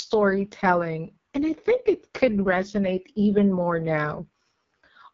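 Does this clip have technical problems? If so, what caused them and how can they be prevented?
Yes. Throughout, the speech carries heavy AMR wideband (HD Voice) codec damage: it sounds rough and raspy, which fits the codec's lowest 6.6 kbit/s mode, where too few bits remain to model the vocal tract and pulse excitation faithfully. On a spectrogram, harmonics look smeared and grainy below 6.4 kHz, a noise-like band fills the region above, and nothing appears past about 7.4 kHz. To prevent it, record or transmit at 12.65 kbit/s or higher.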